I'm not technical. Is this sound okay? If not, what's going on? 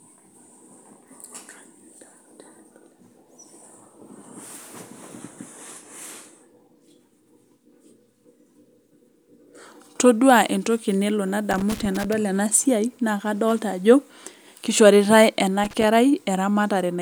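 No, there's loose connector crackle in two places: a scratchy burst from 11.51 to 12.13 s, right after "entoki nelo", and a shorter one from 15.64 to 15.84 s. A worn or dirty plug contact was cutting in and out as it moved.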